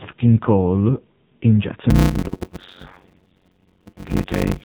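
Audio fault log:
throughout: AMR narrowband mobile codec. The speech has passed through a low-rate mobile speech coder, about 5.9 kbps, which rebuilds each frame from a crude vocal-tract model and a handful of excitation pulses. Nothing above 4 kHz survives, so the sound is boxed-in and dull, and the heavy quantisation at this bitrate leaves the voice buzzy and synthetic.
1.90–4.64 s: block size mismatch (padded). Right after "in jazz", one stage starts delivering 256-sample blocks to a stage that reads longer blocks, roughly 480 samples, and the shortfall in each block is filled with silence. Nearly half of every block is now a gap, so a steady buzz at 91.9 Hz chops through the speech, and the audio drags at 0.53 times its normal speed while keeping its timbre.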